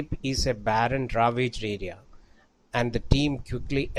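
A speech clip with two brief points where the audio jumps forward, at 1.14 s between "is a barren" and "ravaged area", and at 3.10 s just after "and the". Each is likely a dropped buffer (overrun), in which samples were overwritten before being read and the two sides were spliced together, losing a millisecond or two, then about 3 ms. A waveform shows an abrupt step discontinuity at each point, and a spectrogram shows a thin full-height vertical line.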